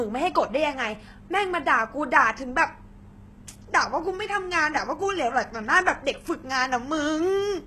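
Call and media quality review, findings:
HE-AAC compression, heavy, throughout the speech. Treble present but synthetic: s sounds gritty and lispy, metallic sheen up top, nothing above 12.3 kHz. Likely spectral band replication patching lower bands upward under a coarse envelope, consistent with HE-AAC v2 at a low bitrate around 16 kbps. Differs from a plain low-pass: the top end stays bright rather than dull, but its harmonics don't line up with the band below.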